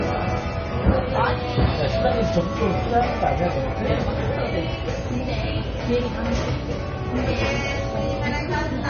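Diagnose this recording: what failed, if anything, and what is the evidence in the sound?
Codec stage: nothing above 6.6 kHz throughout, so this is likely low-bitrate audio saved at a high bitrate, a thin early MP3 re-encoded at roughly 256 kbit/s.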